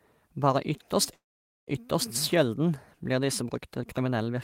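At 1.13 s the speech halts in a call audio freeze lasting until 1.69 s. The last sound is stretched into a brief fading buzz, then about 450 ms of silence. The likely cause is delayed packets draining the jitter buffer. Speech then resumes exactly where it stopped, so nothing is lost, but everything after runs about 540 ms late. On a spectrogram, a short smeared band decays into a blank gap; the waveform shows a flat stretch.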